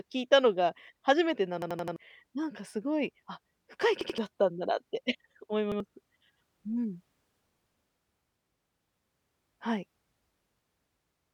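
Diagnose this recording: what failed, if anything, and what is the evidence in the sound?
The driver or buffer stage failed, producing a repeated buffer: new audio arrived late, so the device replayed its last block. A stretch of speech about 85 ms long, which fits a 4096-sample buffer, stutters with a hard join at each repeat. It plays four extra times at 1.62–1.96 s, twice at 4.01–4.18 s, and once each at 5.72–5.80 s and 7.34–7.42 s. Exact, sharply spliced copies distinguish this from a dropout's silence or a codec's smeared concealment.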